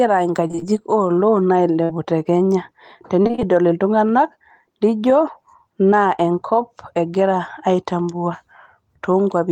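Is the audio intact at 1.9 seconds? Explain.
No. A burst of packet loss runs from 1.84 to 1.91 s, just before "te kenya". Consecutive packets arrived too late or not at all, so the receiver stretched the last received sound across about 54 ms while fading it down. Playback then resumes with about 60 ms of speech skipped. On a spectrogram the final frame's spectrum smears flat and dims, then cuts abruptly to new content. The waveform shows a shrinking pattern before the jump.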